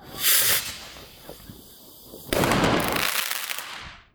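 A sounds recording with frames out of order at 0.60–0.71 s and 3.16–3.22 s: adjacent 52 ms and 26 ms blocks swap places, giving garbled flutter.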